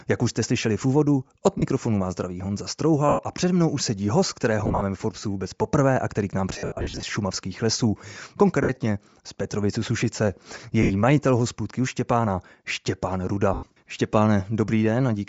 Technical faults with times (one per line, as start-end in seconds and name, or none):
0.00-15.28 Bluetooth LC3 compression
1.58-1.63 lost LE Audio frames
3.09-3.19 lost LE Audio frames
4.59-4.83 lost LE Audio frames
6.53-7.03 lost LE Audio frames
8.63-8.77 lost LE Audio frames
10.83-10.92 lost LE Audio frames
13.54-13.70 lost LE Audio frames